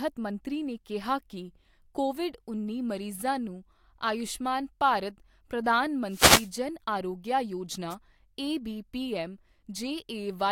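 Wireless microphone noise hits occur at 6.08 to 6.51 s and again at 7.90 to 7.95 s, just before "ਏਬੀ ਪੀਐੱਮ". In each, the analogue FM radio link fades as reflected signals cancel the direct one, so receiver noise swells over the speech. The first lasts about 0.44 s and is heard as a swish of static. The second is a brief burst of about 50 ms.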